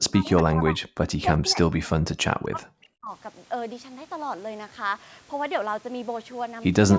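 From 0.0 to 0.82 s and 1.17 to 3.11 s, the speech sinks deeply and breaks up. Likely speech suppressed in double talk: the echo canceller ducked the talker.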